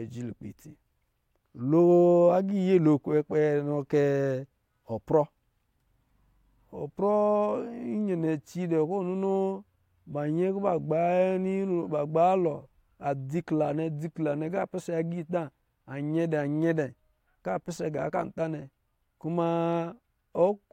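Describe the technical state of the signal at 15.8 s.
At 15.8 s the speech signal is intact, with no audible technical fault at that moment.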